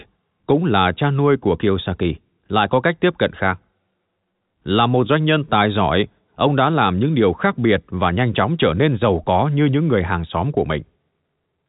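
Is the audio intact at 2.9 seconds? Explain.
Yes, the audio is intact at 2.9 seconds, with only the normal telephone-band sound of G.711 coding, where nothing above about 3.8 kHz comes through.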